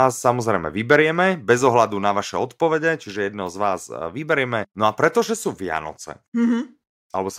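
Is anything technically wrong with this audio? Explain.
Yes, there are two related faults in this speech clip.

From 0.91 to 0.95 s, microphone overload sets a harsh, crackly edge on a loud peak. Input gain is likely set too high, driving peaks about 2 dB past the converter's limit. The waveform shows flattened tops on a small share of samples, and the spectrogram shows broadband smearing above the harmonics.

At 1.02 s, the microphone volume steps down by about 2 dB, likely because the call software responded to that clipped peak. Speech and background both drop together at once. The waveform envelope shows a sudden step, and the spectrogram turns slightly fainter across all frequencies.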